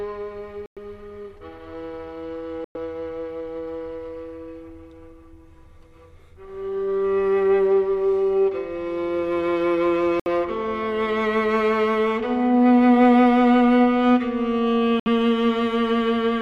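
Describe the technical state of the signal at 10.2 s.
At 10.2 s there's a short hole, from 10.20 to 10.27 s, that's likely a Bluetooth dropout: packets missed their deadline on the wireless link and got discarded, so the output goes silent, then picks up further along as if it never stopped.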